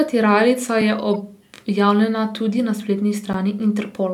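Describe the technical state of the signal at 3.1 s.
At 3.13 s a corrupt frame was decoded: flipped bits in a couple of compressed frames were played anyway, so misread gains and codes placed energy at wrong frequencies. The speech is broken by a brief chirpy blip of noise lasting about those frames.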